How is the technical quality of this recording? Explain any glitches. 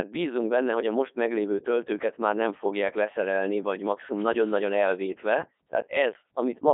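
The recording is heavily degraded throughout by a Codec 2 vocoder. From start to finish the speech sounds robotic and buzzy, confined to a telephone-like band of roughly 250 Hz to 3.6 kHz with nothing above 3.8 kHz. The decoder rebuilds the voice from sine waves driven only by pitch, voicing, energy and a spectral envelope, so the original waveform is gone. This synthetic, steady buzz sets it apart from plain band-limiting or a lossy waveform codec, and the damage fits the 3.2 kbit/s mode.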